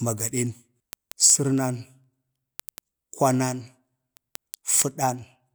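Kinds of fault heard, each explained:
Word clock ticks: Sharp clicks run through the speech at a steady pace of about one every tenth of a second, from 0.19 s to 5.47 s, roughly fifty in all. The receiving device is not locked to the sender's clock. With the two drifting apart by a few hundred parts per million, a single sample is dropped or repeated at each slip. The clock-driven regularity is what separates these from random crackle or dropouts, which land at uneven intervals.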